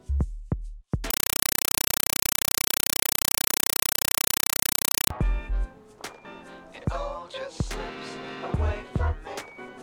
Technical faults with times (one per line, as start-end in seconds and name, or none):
1.10-5.10 compressed stream played as audio